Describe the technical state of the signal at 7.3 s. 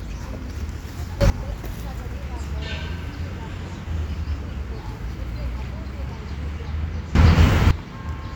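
At 7.3 s the signal sits inside a sudden gain jump that runs from 7.15 s to 7.71 s, lifting the level by about 17 dB. The step happens between one sample and the next, most likely a gain setting applied without a ramp. What separates it from a genuinely louder event or from compressor pumping is that the background noise leaps up together with the sound, instantly rather than over a swell, with an abrupt edge at each boundary.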